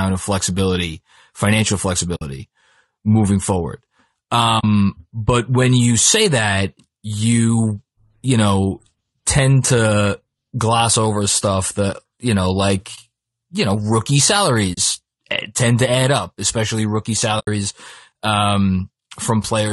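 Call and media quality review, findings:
Speech rough and grainy throughout, with noise filling the gaps between harmonics and a thin, somewhat synthetic top band. Damage plainly audible across the whole clip. Cause likely low-delay AAC compression (AAC-ELD): short frames resolve voice harmonics poorly, and the character points to a bitrate around 32 kbps, too little for clean speech at this frame length.

Short soft-edged holes, sound fading out and back in: 2.15–2.22 s, 4.59–4.64 s, 12.95–12.99 s, 14.73–14.78 s, 17.39–17.48 s. Gaps last 20 to 80 ms, consistent with 20 ms frames. AAC frame loss with muting: the decoder zeroed the lost frames' spectrum, and overlapping windows smoothed the edges.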